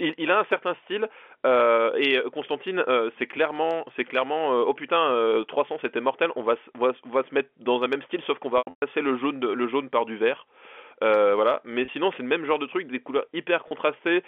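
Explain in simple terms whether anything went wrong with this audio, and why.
Packet loss with pitch repetition at 8.58–8.82 s, 11.85–11.88 s and 13.68–13.71 s. Missing chunks of the phone-line speech were patched by repeating the last voice cycle, which briefly sounds buzzy or held.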